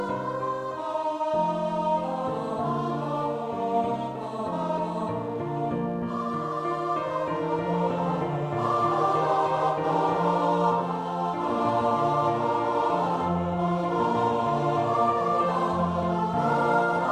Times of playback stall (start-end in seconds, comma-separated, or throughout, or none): none